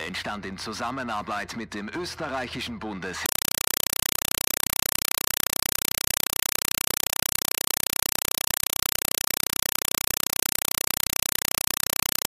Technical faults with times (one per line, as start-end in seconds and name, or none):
3.26-12.29 compressed stream played as audio